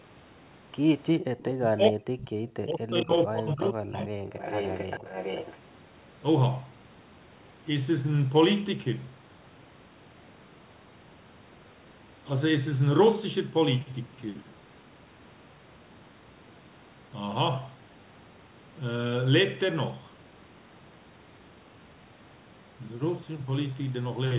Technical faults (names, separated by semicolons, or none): echo leak; speech suppressed in double talk